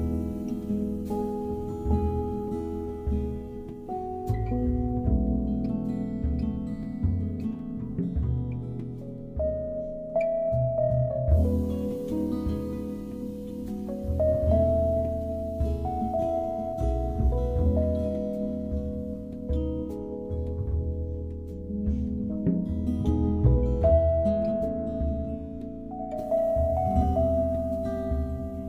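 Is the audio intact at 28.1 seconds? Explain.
Yes, the audio at 28.1 seconds is intact, with no dropout, click, distortion or other fault at that moment.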